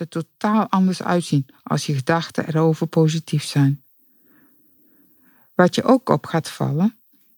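From 0.41 s to 3.84 s the automatic gain control judged the input too quiet and ramped its gain upward, about 5 dB in all, so this automatic gain rising makes the speech and the background noise behind it swell together over those few seconds.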